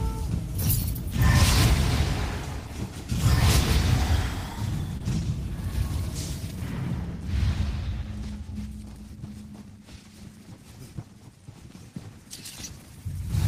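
At 4.97 to 5.02 s there is a short concealed packet loss: about 20 ms of audio arrived too late to decode, and the receiver extrapolated the preceding sound for roughly 23 ms before crossfading back into the real signal, leaving a brief smear or wobble.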